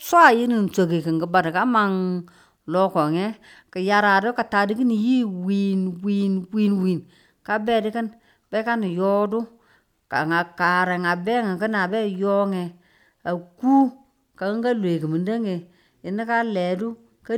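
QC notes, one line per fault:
No faults found in the speech on this clip.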